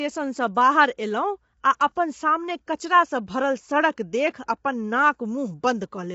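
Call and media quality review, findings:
Rough, grainy speech throughout the clip, with noise filling the gaps between harmonics and nothing above 7.7 kHz. Likely low-delay AAC compression, AAC-ELD, which fits a bitrate around 24 kbps. Its short frames resolve pitch harmonics poorly, and the low bitrate leaves too few bits per frame and plainly audible codec damage.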